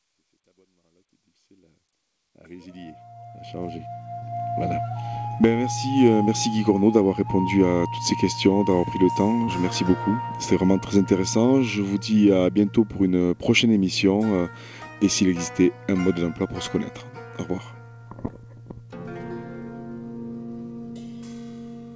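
Short concealed packet loss occurs three times: at 4.20–4.24 s, at 9.44–9.49 s and at 18.27–18.31 s. About 20 ms, 40 ms and 20 ms of audio failed to reach the decoder in time, and the receiver filled each hole by extending the preceding sound before crossfading back. Each is heard as a brief smear or wobble. The first falls near the end of the fade-in, and the band-limit at 8 kHz fits a G.722 call path.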